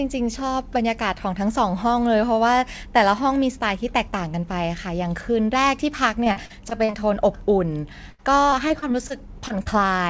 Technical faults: repeated packet loss (robotic sound); short concealed packet loss

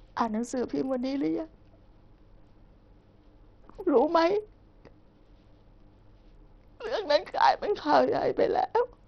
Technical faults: Bluetooth SBC compression

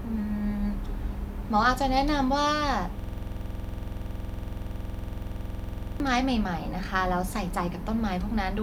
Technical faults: system hang loop

